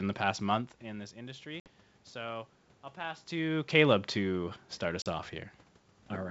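At 1.60 s the speech drops into an abrupt, hard-edged hole, and as it resumes near 1.68 s it comes back slightly distorted before settling. The same happens at 5.02 s, ending about 5.07 s. This is packet loss on an ADPCM call: roughly 60 ms, then 40 ms, of audio went missing and was filled with silence. The decoder's adaptive predictor and step size then lost step with the sender's and took some tens of milliseconds to recover.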